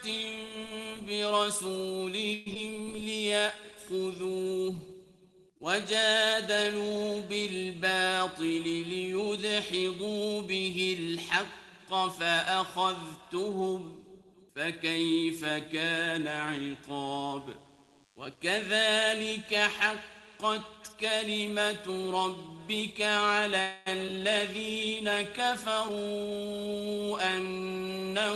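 At 2.33 s the audio stalls for about 0.13 s. The flow of packets was likely interrupted so that the jitter buffer ran dry. The receiver filled the gap by extending the last sound into a fading buzz. When the stream resumes it carries on from the same point, so nothing is lost, but the playback now runs about 128 ms behind. The same call audio freeze returns at 23.61 s, lasting about 0.25 s and adding roughly 247 ms of delay.

Right after the first stall comes a skip ahead at 2.54 to 2.57 s. A stretch of audio was dropped, either on the way or by the jitter buffer, while later audio was already waiting. Roughly 70 ms of material vanishes, bridged by only about 10 ms of fill, so the sound jumps forward with an abrupt splice. The same jump recurs at 24.06 to 24.09 s, just after the second freeze, again dropping around 70 ms.

From 2.78 to 3.61 s a jitter buffer slow-down sets in. The buffer was running low, so the receiver stretched the audio by repeating short pitch-period slices, adding about 51 ms in total. 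Playback drops to about 95 % speed while the pitch stays put, giving slightly drawn-out sounds.

A jitter buffer speed-up runs from 8.00 to 10.21 s. Too much audio had piled up, so the receiver trimmed small pitch-sized chunks, removing roughly 150 ms. The sound moves at about 106 % speed with unchanged pitch and a slightly hurried feel. A stronger speed-up follows at 25.73 to 26.68 s, running at about 119 % and cutting around 200 ms, which makes the audio sound plainly rushed.

Between 17.11 and 20.68 s a DECT cordless phone buzz is present. A nearby DECT handset or base was transmitting short radio bursts every 10 ms, and these were rectified in the audio circuitry. The result is a thin, steady buzz at 100 Hz with a dense train of harmonics, sitting about 40 dB below the programme sound.

Throughout, the call path adds its usual coding noise, and the top end stops near 12 kHz, which fits Opus at around 20 kbps.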